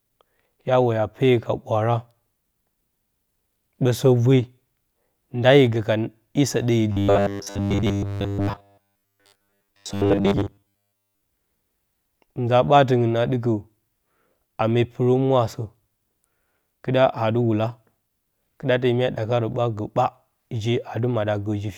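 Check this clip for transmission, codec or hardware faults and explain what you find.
One fault is audible. From 6.92 to 11.22 s there is robotic sound from repeated short buffers: the speech becomes a rigid 100 Hz metallic buzz, likely from looping 10 ms chunks during data starvation. The waveform shows identical repeating blocks, and the spectrogram shows even 100 Hz harmonic stripes.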